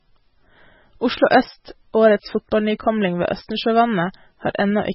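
The speech runs through the whole clip with heavy MP3 compression damage: nothing survives above about 5.6 kHz, and the weak frequency lines that remain flicker on and off between frames, leaving a watery, swirling texture and smeared attacks. The bit budget was likely around 16 kbps.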